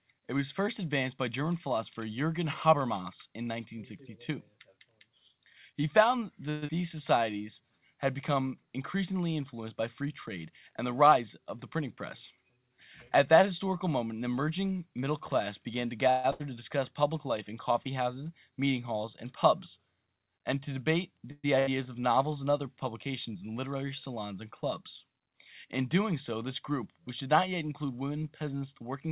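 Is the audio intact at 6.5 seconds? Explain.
No. From 6.5 to 6.7 s the sound smears into a fading buzz for about 184 ms, then resumes with roughly 100 ms missing, likely a long network dropout rather than a brief packet-loss click.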